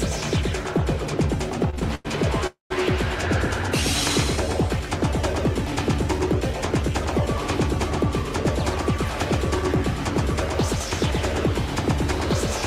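Throughout the clip a doubled audio track is audible. A second, full-band copy of the sound trails the original by roughly 150 ms, a few decibels quieter, giving a hard slap-like echo with no decay or room colour. The fixed lag and clean copy point to the same audio being mixed in twice, likely because a second capture path runs slower than the first or an edit left two copies out of step.

From 1.70 s to 2.07 s there are repeated stalls (stutter). The sound catches four times in quick succession, the longest hold lasting about 96 ms, and stretched-out filler makes up nearly half of that span. Packets were arriving late or too slowly, so the jitter buffer kept emptying and the receiver extended the last sound each time. Nothing is dropped; the audio simply drags and stutters before recovering.

At 2.47 s a call audio freeze begins and lasts until 2.72 s. The last sound is held as a brief continuation that fades, then drops to silence for about 140 ms before the audio resumes where it stopped. 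This is likely a packet hold-up that drained the jitter buffer. The pause inserts roughly 237 ms of extra delay rather than removing any audio.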